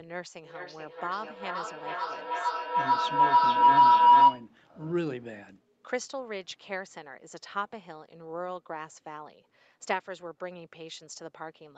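A speech recording in which two devices in the same room shared one call, closing a loop from loudspeaker to microphone that added level on every pass. The result is a feedback howl from 0.44 to 4.53 s: a tone near 1 kHz that swells to about 18 dB above the speech, pulsing roughly every 0.4 s as it circles the loop. Nothing reaches above 8 kHz, which fits the call's Opus coding.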